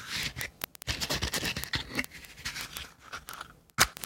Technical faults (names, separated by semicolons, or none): word clock ticks